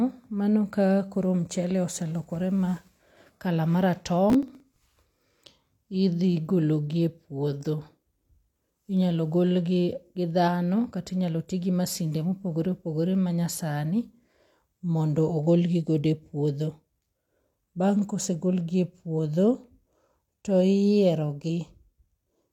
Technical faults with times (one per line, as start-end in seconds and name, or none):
4.30-4.96 processor overload crackle